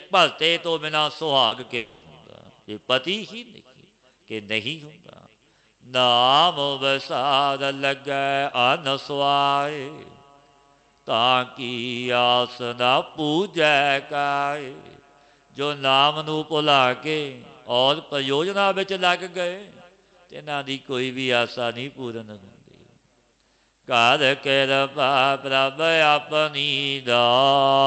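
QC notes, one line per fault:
1.47–1.53 s, short concealed packet loss: a brief smear, with the sound stretching and wobbling for about 40 ms before blending back. A few hundredths of a second of data arrived too late, so the decoder extended the preceding sound to cover the gap.
1.77–2.03 s, long network dropout: the sound turns into a fading buzz or hiss lasting about 240 ms that never falls fully silent, then resumes further on with that stretch missing. The likely cause is a network interruption during which the receiver kept synthesising audio from the last sound heard.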